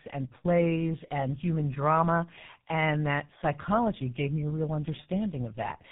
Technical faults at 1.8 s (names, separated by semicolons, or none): tandem speech coding